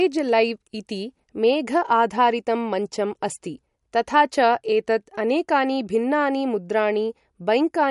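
A speech recording that has likely been through heavy MP3 compression, at a rate that fits roughly 48 kbps. Starved of bits, the encoder removed everything above 11.2 kHz and dropped weaker frequency components frame by frame, leaving plainly audible codec damage throughout.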